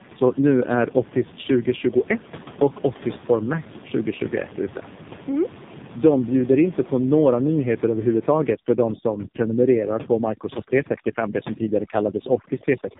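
From start to finish the speech sounds rough, muffled and warbly, with nothing above 3.7 kHz. That is tandem speech coding: it was decoded and re-encoded twice through a low-rate narrowband codec, likely AMR-NB, each pass degrading the last. The room noise sits about 16 dB below it.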